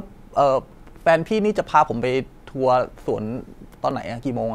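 Regular ticks every 1.01 s from 0.87 to 3.91 s, each about 10 ms of speech skipped: periodic USB or driver dropouts, the driver briefly stalling at a fixed interval.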